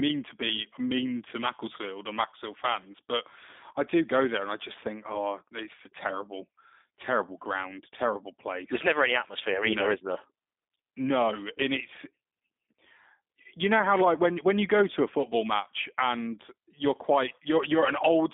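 From start to end, the speech carries G.729 codec damage. Nothing above 3.8 kHz survives, and the line band sits near 250 Hz to 3.6 kHz. The voice is rebuilt at about 8 kbit/s from a filter, pitch predictor and sparse pulses. It sounds thin, rough and plainly synthetic.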